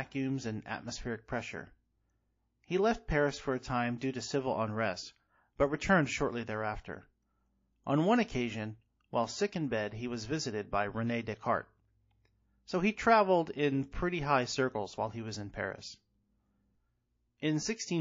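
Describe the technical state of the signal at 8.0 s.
At 8.0 s the speech carries plainly audible damage, likely from MP3 compression, present across the whole clip and consistent with a low bitrate near 32 kbps. Weak frequency lines are zeroed and return frame by frame, giving a watery, swirly sound with chirpy sibilants and smeared onsets; a spectrogram shows flickering, patchy holes.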